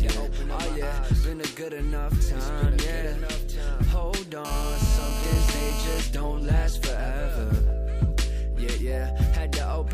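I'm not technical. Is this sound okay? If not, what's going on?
No, from 4.45 to 6.0 s there's GSM phone buzz: a nearby mobile on a call pulses 217 times a second, and the audio gear picks that up as a harsh, steady rasp.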